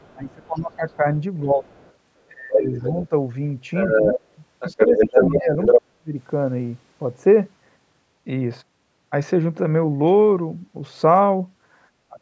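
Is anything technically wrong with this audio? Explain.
Yes. Other side's voice leaking through at 0.0–0.95 s, 1.74–1.93 s, 2.53–3.03 s and 3.74–5.79 s, likely residual loudspeaker echo the echo canceller missed. It is faint at first, then as loud as the speech.

Speech suppressed in double talk at 0.12–1.66 s, 2.27–3.12 s, 4.87–6.14 s and 12.07–12.21 s, likely because the canceller muted both sides during overlap. The speech drops sharply, deepest near 5–6 s.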